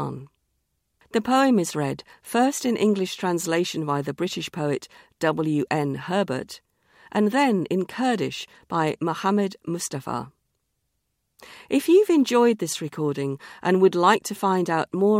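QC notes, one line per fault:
No faults heard.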